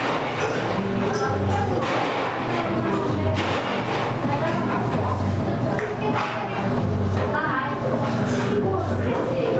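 Everyday sound carrying gain pumping throughout: the gain swings by roughly 10 dB, squashing loud and soft parts together. The likely cause is gain set far too high, with a fast limiter clamping down. Unlike a noise gate, pumping lifts quiet background in pauses instead of silencing it. Nothing sounds above 8 kHz, which fits a band-limited Opus call path.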